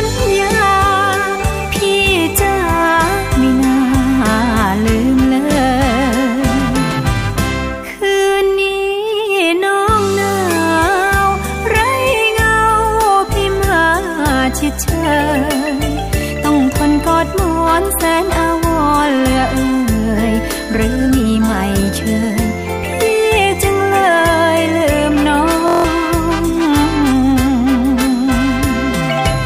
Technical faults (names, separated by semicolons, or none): system hang loop